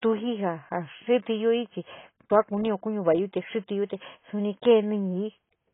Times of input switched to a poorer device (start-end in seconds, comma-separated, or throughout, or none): none